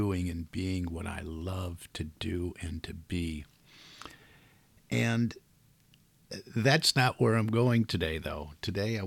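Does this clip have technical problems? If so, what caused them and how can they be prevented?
No, there are no technical problems in this clip.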